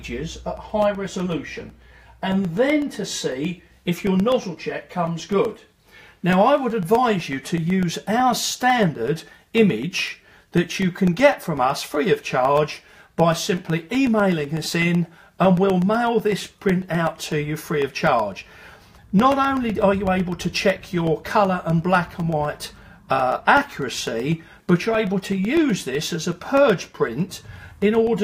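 From about 0.07 s right through to 28.07 s there's a steady run of periodic USB or driver dropouts, one every 0.125 s, so eight a second and around two hundred in all. Something keeps stalling the bus or audio driver on a fixed schedule, and each time roughly a millisecond of audio goes missing and is replaced by silence. You hear it as an even, clock-like ticking riding on the sound, only where there's signal.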